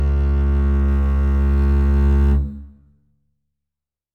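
A music clip with crude rate conversion from 0.88 s to the end. Samples are dropped or repeated without filtering. It fits 48 kHz to 44.1 kHz. A faint inharmonic fizz follows loud, bright passages, roughly 45 dB down.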